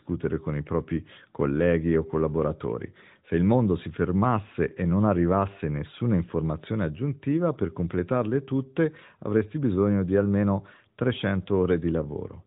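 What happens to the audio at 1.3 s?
At 1.3 s the audio is intact, with nothing breaking into the speech as it passes through the AMR narrowband mobile codec, whose band stops at about 3.8 kHz.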